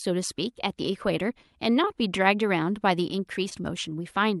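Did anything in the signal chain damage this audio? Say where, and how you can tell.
Yes. At about 3.49 s there is a short concealed packet loss on the network side of the call. Roughly 20 ms of speech never reached the decoder, and concealment filled it by extending the preceding sound before blending back in. The result is a brief smear rather than the hard click or clean gap that a buffer dropout produces.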